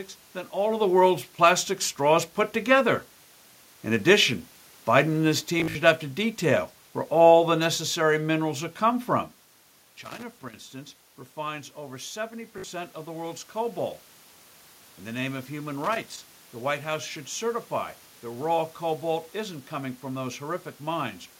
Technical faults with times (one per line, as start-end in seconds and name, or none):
5.60-5.75 Bluetooth stutter
10.04-10.55 loose connector crackle
11.42-13.52 automatic gain rising
12.58-12.64 Bluetooth stutter
15.84-16.44 loose connector crackle